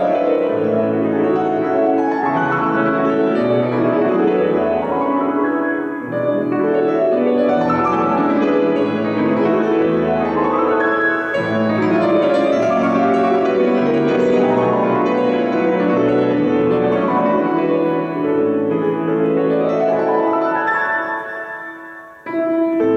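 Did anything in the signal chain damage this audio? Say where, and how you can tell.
No, nothing in the signal chain damaged this audio.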